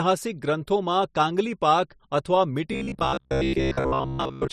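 From 2.72 s to 4.52 s the speech turns into robotic sound from repeated short buffers. New audio likely arrived too seldom, so a short slice kept repeating while most of the real audio was skipped. The repeats impose a rigid, metallic buzz at 66.8 Hz, which fits a buffer of about 15 ms.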